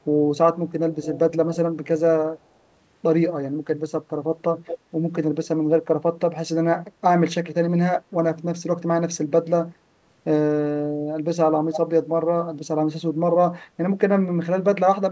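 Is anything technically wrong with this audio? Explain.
Yes, there is an echo leak. At 0.92 to 1.19 s, 4.65 to 4.78 s, 5.44 to 5.48 s and 11.73 to 11.78 s, a delayed copy of the speech appears, trailing by 237, 208, 208 and 284 ms, roughly 15, 10, 25 and 10 dB below the direct sound. The likely cause is a far-end loudspeaker whose echo canceller let some of the returned signal through. On a spectrogram, each spot shows a weaker, time-shifted repeat of the speech's harmonic pattern, and in the waveform a small secondary burst follows the main one.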